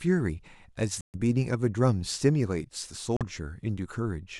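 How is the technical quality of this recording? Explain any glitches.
The speech has two brief dropouts. At 1.01 to 1.17 s and 3.17 to 3.24 s, it cuts to silence for 130 ms and then 42 ms before resuming, likely a Bluetooth stall where the headphone buffer ran dry awaiting resent packets. Each shows as a flat gap in the waveform and a blank vertical band on a spectrogram.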